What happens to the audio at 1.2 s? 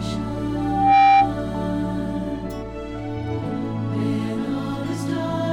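At 1.2 s you're right in the middle of a loudspeaker feedback squeal, running from 0.56 to 1.35 s. The mic is hearing its own speaker, and around 788 Hz the loop gain tops one, so that tone swells over a few tenths of a second into a whistle roughly 10 dB above the audio.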